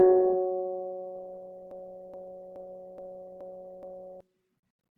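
From the start, the music sounds grainy and rough, its tones smeared into a noisy texture without the swirling holes of MP3. This is likely Opus compression in its music mode, filling starved bands with folded or noise content, which fits a bitrate near 16 kbps.

From 1.71 s to 4.21 s, a 0.42 s fragment repeats exactly, back to back, six times, like a broken-record loop. The stream or player likely stalled and kept resending its last fragment, so the music for that stretch is lost.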